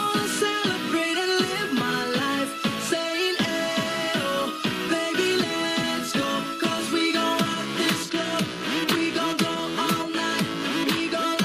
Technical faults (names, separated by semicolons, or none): MP2 compression